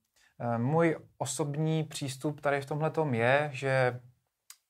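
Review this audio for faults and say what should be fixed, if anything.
Nothing needs fixing: the speech signal shows no technical faults anywhere in the recording.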